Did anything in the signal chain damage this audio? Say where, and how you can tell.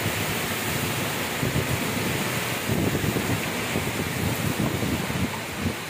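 Yes: until 2.58 s a dry copy about 5 dB down trails everything by roughly 150 ms and stops abruptly. This doubled audio track likely comes from a slower second capture path.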